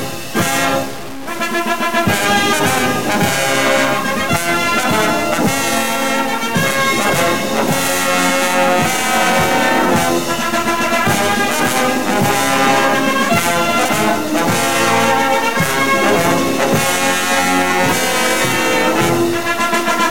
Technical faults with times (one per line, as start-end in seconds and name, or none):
0.00-20.11 low bit depth without dither